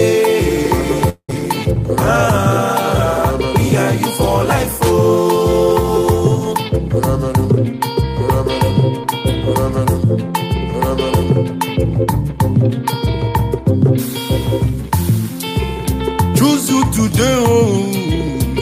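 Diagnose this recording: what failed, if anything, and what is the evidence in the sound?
The network stage is the likely culprit: a long network dropout between 1.09 and 1.30 s, where incoming audio stopped arriving and about 200 ms of it was never played. The receiver's concealment filled the gap by stretching the last sound into a fading buzz or hiss for roughly 190 ms, leaving about 80 ms of silence. When the stream resumes at 1.30 s, it picks up further along, with the lost portion skipped rather than delayed.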